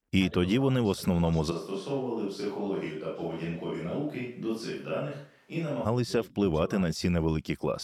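Speech, with one abrupt change: from 1.53 to 5.84 s, right after "тоді вони в основному", the sound turns hollow and roomy, loses bass and drops about 5 dB, likely a switch to a distant microphone.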